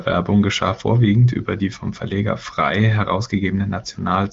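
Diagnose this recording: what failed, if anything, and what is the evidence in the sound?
Nothing in this speech recording stood out as a failure on listening, with no stage of the chain drawing attention to itself.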